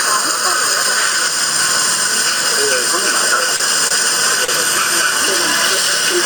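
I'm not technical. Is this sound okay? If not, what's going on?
No, there are two problems. The first is gain pumping. The level was likely set far too high, so an automatic limiter keeps pulling it down whenever something loud happens. Throughout the clip, the level keeps being pulled down on loud sounds and let back up afterwards. Loud and soft moments end up too similar, and everything sounds squashed and flattened.

The second is a short stall from a late packet, which happens three times: at 3.56, 3.88 and 4.45 seconds. Each time, a piece of the audio arrived late over the network and the receiving end had nothing ready to play. To cover the gap it held the last sound for about 30 to 37 thousandths of a second, then continued from the same spot. Nothing is lost, but each moment drags briefly with a faint buzz or dip.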